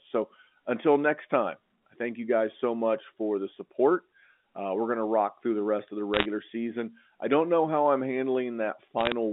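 From 5.71 to 7.35 s, a loudspeaker feedback squeal appears. A single 4.4 kHz tone swells over about a second, peaking around 5 dB above the speech.

From 6.14 to 6.26 s and again from 8.99 to 9.12 s, bit errors on the digital phone line add sharp ticks and crackle. Flipped bits corrupt individual samples at roughly one percent and 0.7 percent respectively. The G.711 telephone coding carrying the line adds at most faint damage of its own.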